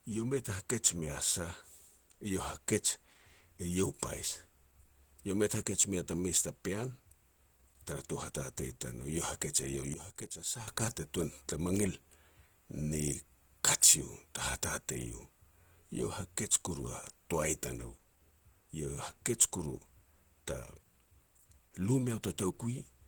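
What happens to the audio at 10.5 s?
Sudden gain jump, from 9.94 to 10.68 s: at 10.5 s the speech and its background noise sit together about 12 dB lower, having dropped in a single step at 9.94 s and jumped back at 10.68 s. The likely cause is a gain setting applied instantly, with no ramp.

Opus compression is present at that moment too, and throughout the speech: it sounds muffled and hoarse, with grainy, rough texture. This likely comes from a low-rate Opus encode, around 16 kbps, running in its hybrid speech mode.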